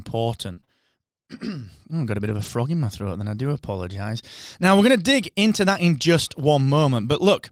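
A speech clip with two network faults. From 0.53 to 0.69 s there is repeated packet loss with a robotic sound. Three short gaps, the longest 33 ms, are patched by stretching prior sound, so about half that span sounds choppy. From 2.25 to 2.51 s, between "I've got a" and "in my throat then", a lost packet is rebuilt from error correction. The 140 ms stretch, which fits seven lost packets, has no gap but plays back rougher and noisier.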